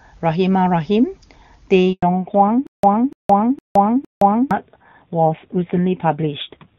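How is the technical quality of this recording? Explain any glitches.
The recording has three clear faults, starting about two seconds in.

Handover gap, 1.93 to 2.03 s: the speech fades within a few tens of milliseconds and then stops dead for 100 ms while the call switches networks and no speech frames arrive. On a waveform it appears as a flat line, and a spectrogram shows a blank vertical band across all frequencies.

Fallback to narrowband, 2.03 s to the end: before the gap, the wideband HD Voice codec keeps the speech crisp, which fits AMR-WB at a high rate. After the switch, the call falls back to a narrowband codec, plausibly AMR-NB around 7.4 kbit/s. Everything above 4 kHz disappears, so the spectrogram's upper band goes empty along a hard ceiling, and the voice turns duller and rougher.

Stutter with silent gaps, 2.67 to 4.51 s: the same 0.29 s burst plays four times, each followed by 0.17 s of digital silence, at an even 0.46 s period. 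The likely cause is a stalled stream replaying its last fragment on each retry. The waveform shows identical blocks separated by flat gaps, and the audio that should have played there is lost.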